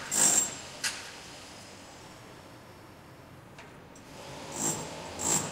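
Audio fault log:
2.01–3.39 s, wrong sample rate: across this stretch the sound runs about 1.09 times too fast and sits about 1.47 semitones sharp, with speed and pitch rising together by the same ratio. Samples are being clocked out faster than they were captured, with no rate conversion in between, so everything is compressed in time and shifted upward at once. The ratio fits material recorded at 44.1 kHz but played back at 48 kHz.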